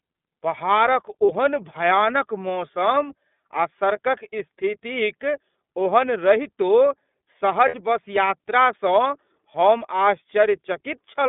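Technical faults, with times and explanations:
Throughout: iLBC codec. The speech sits in a narrow telephone band, about 200 Hz to 3.6 kHz, with nothing above. Each frame's excitation is coded on its own, giving a plainly rough, synthetic edge. This fits iLBC's 13.33 kbps mode with 30 ms frames.
1.26–1.30 s and 7.68–7.75 s: lost iLBC frames. Packets dropped, about 30 ms at the first point and 60 ms at the second. The decoder fills each gap by repeating the last pitch cycle mixed with noise, heard as a brief held, buzzy vowel. The speech recovers at once because each frame stands alone.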